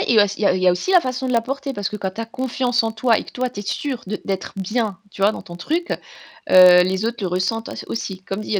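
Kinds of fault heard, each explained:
Filter restarted on every block: From 0.79 s, after "a il y a", to the end, a filter loses its memory at each block boundary. Each block starts with a transient. These form a buzz at 43.1 Hz, which fits a 1024-sample block. It follows speech level.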